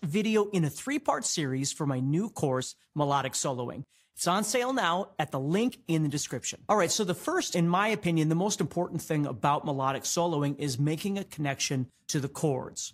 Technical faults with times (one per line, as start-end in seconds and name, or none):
none